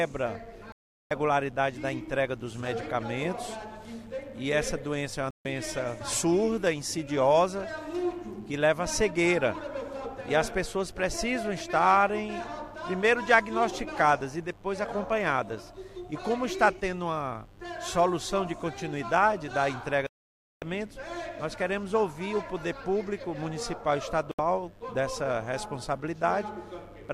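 Digital broadcast dropouts mute the sound at 0.72–1.11 s, 5.31–5.46 s, 20.07–20.62 s and 24.31–24.39 s. The receiver lost valid frames and went silent. Unlike analogue fading, there is no hiss or crackle. The gaps are clean, and the programme resumes further on with the missing material skipped.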